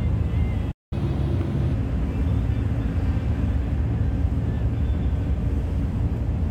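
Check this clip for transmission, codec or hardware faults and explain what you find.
Two related playback faults appear early in the clip.

Playback stall, 0.71 to 0.93 s: the sound cuts to silence for about 200 ms and then resumes. The player likely ran out of buffered data or had its output thread blocked, so nothing reached the output until it recovered.

Catch-up at higher speed, 0.93 to 1.73 s: right after the gap the audio runs fast and sounds audibly higher, roughly four semitones up, before settling back. The player resampled its backlog at 1.25 times normal speed to recover the lost time, raising pitch along with tempo.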